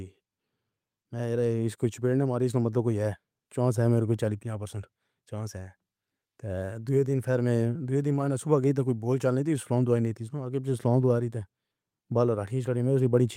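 No technical faults detected.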